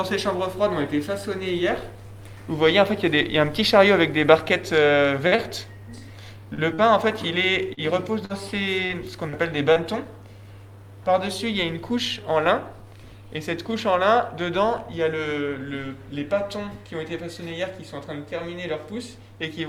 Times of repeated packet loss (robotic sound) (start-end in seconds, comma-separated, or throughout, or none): 7.74-9.79